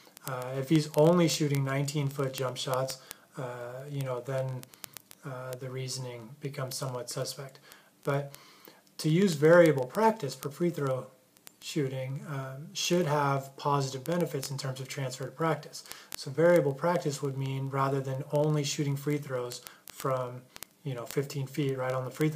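From 0.11 s to the end, word clock ticks recur roughly every 20 ms: an unlocked receiver clock, about 1000 ppm off, drops or repeats single samples.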